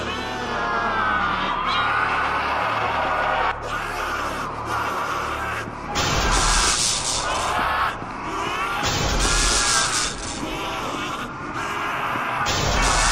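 Throughout the clip the audio is dull and carries a granular, gurgling roughness, most likely from MP2 compression at a low rate, which fits around 80 kbps. MPEG Layer II divides the spectrum into 32 equal sub-bands and shares a fixed bit budget among them. At this rate the upper bands drop out and flicker in and out, and the remaining ones are quantised coarsely, producing the plainly audible smeared, bubbly texture.

From 2.94 s to 3.10 s there is a short burst of DAB burbling: blips of noise in single sub-bands laid over the programme. Residual bit errors, at a rate well under one percent, have slipped past the error correction into the MP2 stream. They corrupt samples. Roughly eight frames are hit.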